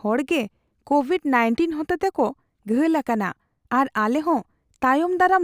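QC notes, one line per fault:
Throughout, crude rate conversion. A faint gritty fizz rides on the speech, loudest on loud and bright sounds. Samples seem linearly interpolated without a filter, which fits a 32 kHz to 48 kHz step. The repeating error creates unrelated tones around 40 dB below the speech.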